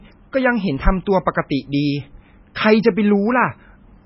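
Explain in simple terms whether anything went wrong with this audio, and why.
The whole clip sounds heavily watery and dull, with nothing above 5.6 kHz. That is likely MP3 compression, squeezing the speech too hard.

At 2.55 s there is pre-echo. A brief hiss comes just before a sharp sound, because the codec smeared its noise backwards in time.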